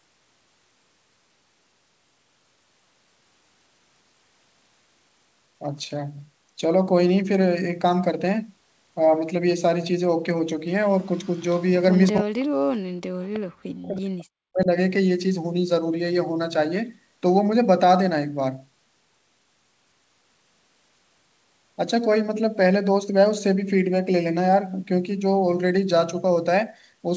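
From 11.03 to 11.62 s there's a faint delayed copy of the speech trailing it by about 331 ms, sitting around 35 dB under the main voice, and a brief stronger blip of the same thing at 12.06 to 12.11 s, maybe 25 dB down. That's an echo leak. Most likely the far end has the call on a loudspeaker and its echo canceller didn't fully scrub the mic pickup, so some of the returning audio came back.

Right after, from 12.12 to 12.98 s and again from 13.28 to 14.69 s, the speech gets pushed way down, dropping by something like 40 dB at its deepest. Around 2 s in total is affected. That's speech suppressed in double talk. Likely both sides were talking at once, and the echo canceller couldn't tell the local talker from the loudspeaker echo, so it ducked everything. All of this sits within the G.722 call band, which has nothing above 8 kHz.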